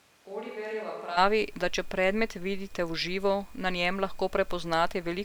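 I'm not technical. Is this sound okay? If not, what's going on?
No. From the very start until about 1.16 seconds, the speech sounds far away. It is roomy and hollow, thinner in the low end, noticeably quieter, and the background noise is easier to hear. Then it suddenly snaps back to a close, full sound. This is a switch to a distant microphone. The close microphone was likely not being picked up for that first second, so a mic further across the room filled in.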